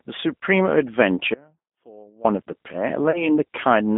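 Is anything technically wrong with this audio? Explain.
Yes, there are three problems. Throughout, the G.729 codec band-limits the speech to roughly 200 Hz to 3.6 kHz at 8 kbit/s. Its pulse-based excitation makes the damage plainly audible as a rough, synthetic quality, and a spectrogram shows nothing above 3.6 kHz.

From 1.34 to 2.25 s there is an audio dropout to a faint residue. The speech cuts abruptly to a faint sound roughly 25 dB down, likely because the signal was lost while the downstream path stayed live. The waveform collapses to a thin band with sharp edges.

From 3.11 to 3.35 s there is VoIP packet loss concealed by the speech codec. About 30 ms of audio, which fits a single lost packet, is extrapolated into a fading buzzy tone or coloured noise, and the voice stays weakened afterward. A spectrogram shows smeared, decaying energy.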